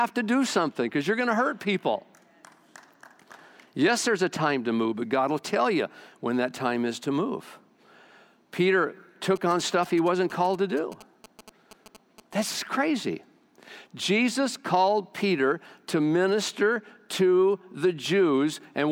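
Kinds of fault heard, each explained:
GSM signalling bursts: a nearby 2G phone transmitting short groups of radio bursts while signalling to its network, picked up and rectified by the audio circuit; from 9.36 to 12.44 s the speech gets a galloping dit-dit-dit of short 217 Hz buzzes, about 20 dB below it.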